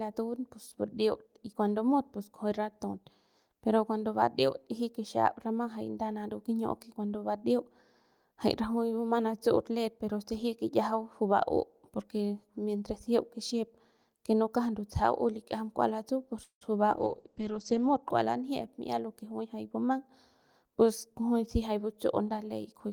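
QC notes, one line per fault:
16.43 to 16.63 s, call audio freeze: right after "likiajam kua latsu pus" the sound stops moving forward for about 177 ms. The last sound trails on as a fading buzz, then about 110 ms of silence, before the speech resumes exactly where it left off with nothing lost. This is likely packets arriving late and the jitter buffer running dry, so the receiver stretched the final sound to fill the wait, adding roughly 177 ms of extra delay.
16.93 to 18.09 s, call bitrate drop: just after "kua latsu pus juy" the speech turns coarse and muffled. The encoder's rate fell from 32 kbps to 10 kbps and stayed at its lowest for about 1.03 s. With so few bits Opus quantises the spectrum roughly, giving the watery, grainy texture, and it narrowed the coded band from 20 kHz to 8 kHz, which removes the upper frequencies and dulls the consonants until the rate recovers.
18.61 to 20.05 s, jitter buffer speed-up: the speech runs at about 107% of normal pace with its pitch unchanged, so it sounds slightly hurried. 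The buffer was carrying more audio than its target, and to cut that latency the receiver repeatedly removed short slices of one or a few pitch periods. In total roughly a tenth of a second was trimmed, which shortens the timing without shifting pitch.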